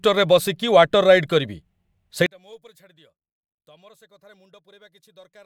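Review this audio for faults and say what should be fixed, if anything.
From 2.26 s to 5.46 s the speech drops by about 34 dB to a faint residue. The likely cause is one channel inverted, so the shared centre cancels when the stereo is summed to mono. Unlike a dropout, a faint trace of the channel difference remains rather than silence. Check the polarity of each channel before summing or delivering a mono fold-down.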